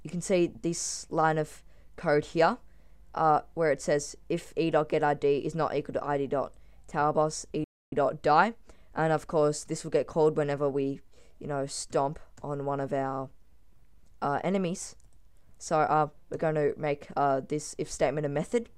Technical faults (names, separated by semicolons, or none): playback stall